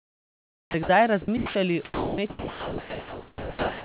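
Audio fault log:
0.00–0.74 s and 1.37–1.55 s, comfort noise in place of the background: the sender likely stopped transmitting during these pauses, so the receiver filled them with synthetic noise. The real background gives way to a steady, featureless hiss, about 5 dB quieter in the first gap and about 2 dB louder in the second.
0.72–0.74 s, onset clipped by the voice detector: the detector was likely slow to register that speech had resumed, so the first 20 ms was never sent and comfort noise played in its place. The first sound begins abruptly, without its soft start.
0.83–0.89 s, 1.22–1.28 s, 1.85–2.18 s and 2.30 s to the end, sound dropped by the voice detector: quiet stretches of speech were likely mistaken for background, and transmission stopped. Steady noise replaces about 60 ms, 50 ms and 310 ms of speech, then about 0.8 s over the final stretch.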